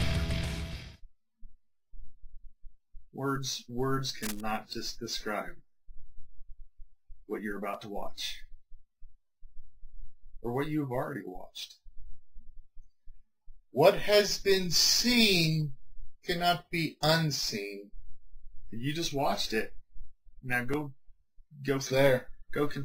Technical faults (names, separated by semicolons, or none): cable scratch noise